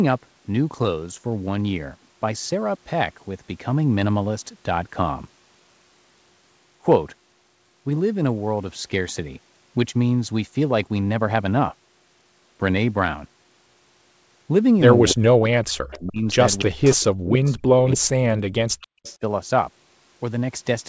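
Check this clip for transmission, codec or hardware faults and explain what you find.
Two call faults cluster in the second half of this speech clip: leaked echo and suppression of the talker during double talk. The wideband call path's usual cut-off at 8 kHz is also visible.

Echo leak occurs at 15.09–15.13, 15.92–15.99, 16.58–16.91, 17.46–17.51 and 18.82–19.17 s. A faint copy arrives 284 ms behind, about 15 to 25 dB down, likely from a loudspeaker echo canceller letting residue through. On a spectrogram it shows as weak, shifted repeats of the harmonic pattern.

Speech suppressed in double talk runs from 15.12 to 16.27 s and from 16.63 to 19.22 s. The voice dips or cuts out in pieces, by up to around 40 dB. The likely cause is the canceller confusing the talker with echo while both sides spoke. The waveform shows deep notches, and the spectrogram shows gaps.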